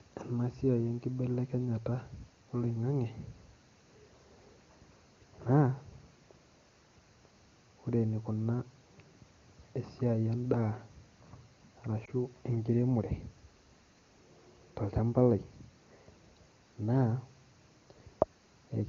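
It's a speech recording with one lost AMR speech frame, heard as a brief dip or warble from about 12.05 to 12.10 s. The dropout is short enough to fit a single missing 20 ms frame. Radio errors corrupted that frame, so the decoder patched the gap by reusing the last good pitch and vocal-tract settings at reduced gain, then the voice came back weak or rough for a moment. The wideband HD Voice coding is clear, consistent with one of the higher AMR-WB rates.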